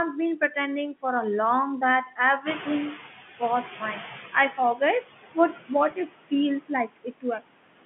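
Throughout, the background sinks between phrases and swells under them, the noise suppressor artifacts of roughly 15 dB of frame-by-frame band reduction. From 0.12 to 0.56 s, and again from 1.78 to 2.98 s, parts of the speech turn faint and swallowed, dropping by up to about 11 dB and then about 13 dB. This is speech cut by the noise suppressor, which mistakes some of the speech for noise and turns it down with the background. Around 2.5 s the room noise jumps by about 12 dB. From 2.46 to 4.7 s that louder noise comes through strongly at first and then gradually sinks, as the noise suppressor catches up over 2.24 s to reach about 13 dB of reduction. From 4.33 to 7.41 s speech is swallowed again for roughly 700 ms in total, with drops as deep as about 21 dB. At 5.91 s there is a brief buzzy hold, packet loss with pitch repetition, where the receiver repeated the last pitch period to cover 10 ms of missing audio, which fits a single lost packet.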